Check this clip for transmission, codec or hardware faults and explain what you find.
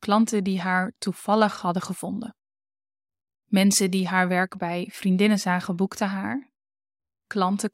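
One fault is audible: pre-emphasis left on, from 2.00 to 4.00 s, starting after "die haar toevallig hadden" and ending before "haar werk bij vriendinnen". The treble boost of a CD-style 50/15 µs pre-emphasis curve was applied without the matching de-emphasis, so highs sit about 8 dB hotter at 10 kHz than at 1 kHz. The speech turns thin, bright and hissy on sibilants. On a spectrogram, the band above a few kHz brightens across exactly that two-second block. The waveform shows spikier, sharper-edged peaks there.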